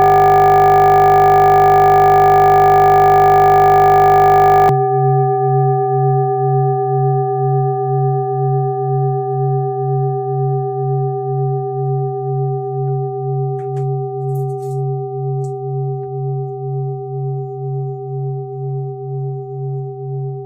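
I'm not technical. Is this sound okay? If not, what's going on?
No. From the very start until about 4.69 s, the audio is stuck in a system hang loop. The computer froze while the sound hardware kept replaying one 20 ms scrap over and over, so it becomes a steady 50 Hz buzz rather than a machine-gun stutter.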